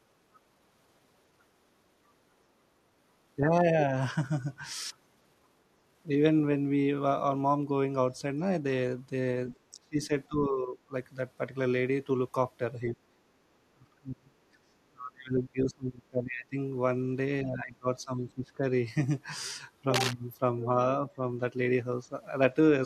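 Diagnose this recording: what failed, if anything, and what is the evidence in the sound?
Call processing: a brief scrap of the other side's voice leaking through at 9.52 s, about 20 dB under the speech, likely residual echo the canceller missed.

Call processing again: speech suppressed in double talk at 9.73–10.11, 10.29–10.93, 12.9–14.37, 14.53–16.56 and 17.43–18.64 s, dipping roughly 20 to 40 dB, likely the canceller ducking both sides.

Analogue wiring: a burst of cable scratch noise from 19.94 to 20.13 s, nearly as loud as the speech, likely a worn connector or lead being moved.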